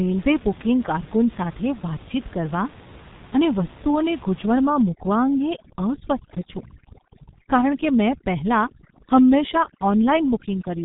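G.723.1 codec damage runs through the whole speech clip. Nothing above about 3.8 kHz survives, and the heavy coding leaves the voice muffled and hoarse with smeared consonants, which fits a low-rate stream around 6 kbit/s. Overdone noise removal takes over from 4.67 s to the end. Bands near the estimated noise floor are cut so hard that the room noise, sitting about 21 dB below the speech, collapses into twinkling near-silence.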